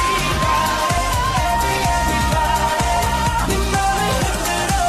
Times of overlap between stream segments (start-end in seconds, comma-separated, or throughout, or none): 0.98, 2.97